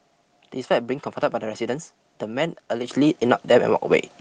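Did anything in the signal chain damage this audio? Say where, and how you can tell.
Yes. Microphone volume stepped up at 2.88 s and again at 3.9 s. The call software's gain control raised the device's input level in single steps, about 8 dB then about 3 dB, so the speech and background jump louder together each time.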